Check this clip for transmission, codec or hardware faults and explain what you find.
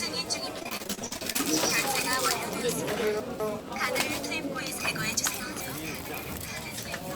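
Two kinds of transmission fault are present: a burst of repeated packet loss near the start, and two places where chunks of audio play out of order.

Repeated packet loss (robotic sound) runs from 0.59 to 1.41 s. Some fourteen short dropouts occur in quick succession, the longest about 38 ms, adding up to roughly 300 ms of missing audio. Each hole is patched by stretching the preceding sound forward, so about a third of that stretch is synthetic fill. The rapid alternation of real and repeated fragments gives a choppy, robotic texture with pieces visibly absent.

Chunks out of order occur from 3.2 to 3.6 s and again from 4.8 to 5.6 s. In both places a 200 ms block of audio arrived or was written late and plays after material that should follow it: one chunk late in the first case, three chunks late in the second. No audio is lost, but the sequence is wrong, leaving three hard splice points in each region. 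These are heard as a jumbled, garbled moment, longer around 5 s.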